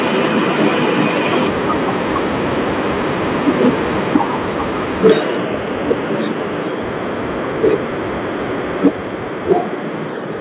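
At 4.15 to 4.17 s a short burst of harsh crackle lands on a loud peak, driven about 8 dB past the converter's limit with roughly a fifth of the samples flattened. This is microphone overload, most likely from the input gain being set too high for the converter. Right at 4.16 s the level drops by 3 dB in a single step. That is likely the microphone volume being stepped down, and it is heard as a sudden, lasting fall in loudness rather than distortion. The overload returns at 5.05 to 5.13 s (about 6 dB over, roughly 15% clipped), which is the longest burst. There is no level drop after it. At 8.85 to 8.88 s a milder crackle (about 4 dB over) is again followed at 8.86 s by another 3 dB step down. A final overload at 9.51 to 9.53 s is about 4 dB over, with only a small share of samples clipped. What separates the two faults is how they sound. Clipping adds a gritty, buzzy edge for a few tens of milliseconds and then the sound is clean again. 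The step-down adds nothing harsh but leaves everything after it, background included, quieter. Through the G.711 call path nothing above 4 kHz survives, so the clipping is heard as dull crunch, not bright fizz.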